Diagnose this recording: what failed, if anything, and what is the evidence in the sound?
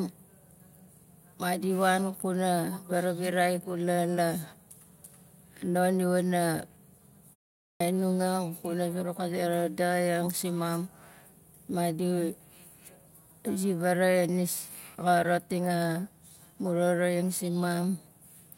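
The playback stage shows a clipped start after a pause. Following a 0.34 s silence, sound resumes abruptly at 7.61 s without its opening, and 194 ms is lost up to 7.80 s while the output device wakes from idle and relocks before passing audio.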